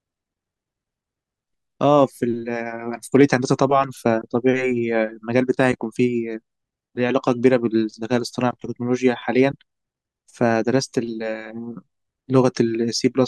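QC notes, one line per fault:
3.15–3.64 s, hard clipping: for about half a second the speech pushes roughly 2 dB beyond what a stage in the chain can pass, so the waveform peaks are sliced off flat instead of rounding over. Those squared tops generate harmonics well above the natural spectrum. Because the overload is small, it comes through as a brief crackly roughness riding on the loudest moments of this stretch rather than a continuous fuzz.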